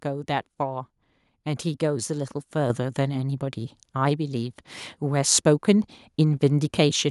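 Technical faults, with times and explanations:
2.7 s, microphone volume stepped up: the call software judged the input too quiet and raised the device's volume in a single step of about 7 dB. Unlike a talker getting louder, voice and background noise jump together, instantly and with no gradual ramp.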